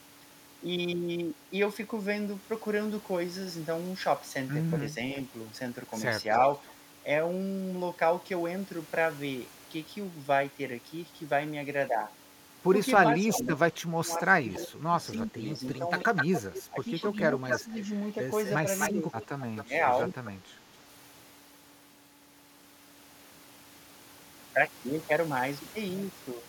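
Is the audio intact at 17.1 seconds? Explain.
No. From 13.06 to 20.18 s the talker's level dips by roughly 15 dB in patches, speech suppressed in double talk, likely an echo canceller ducking its own talker along with the loudspeaker echo while they overlap. From 15.74 to 20.31 s an echo leak adds a second copy 255 ms late, only a little quieter than the speech, likely loudspeaker pickup the canceller missed. The suppression loses sound, while the leak adds a delayed repeat.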